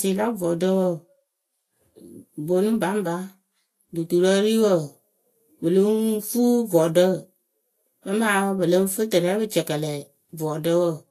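Throughout the speech, nothing is heard above 14.1 kHz, and the smeared texture of heavy compression persists. This is low-bitrate audio saved at a high bitrate, likely audio that fits a Vorbis encoding near 33 kbit/s re-encoded as MP3 near 320 kbit/s. Unlike plain low-bitrate MP3, the generous second bitrate restores nothing.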